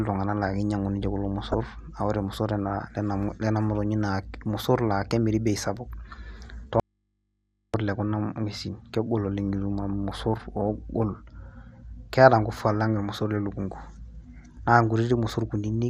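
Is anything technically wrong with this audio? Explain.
Yes, there are three problems.

Throughout the speech, the sound has the character of MP2 compression, likely from encoding at a rate that fits roughly 80 kbps. MPEG Layer II divides the audio into 32 sub-bands and shares a bit budget among them. At this rate the upper bands are starved and keep switching off, and the remaining bands are coarsely quantised. The result is plainly audible: a dull top end with a gurgling, grainy roughness running under the speech.

From 1.52 to 1.54 s there is a short burst of DAB burbling. Bit errors, at a low rate of around a tenth of a percent, slipped past error correction into the MP2 data, and the burst spans a handful of frames. Corrupted samples put short blips of noise into single sub-bands, and corrupted scale factors make sub-bands leap in level for up to a frame, giving a brief burble on top of the speech.

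From 6.80 to 7.74 s the speech cuts out abruptly for about 0.94 s, an audio dropout to a faint residue. The likely cause is the wanted signal being lost while the downstream path stayed live, leaving its input open. The gap therefore holds mains hum at a level roughly 50 dB below the speech, and the speech then snaps back mid-flow. The sudden edges set this apart from a natural pause or a fade.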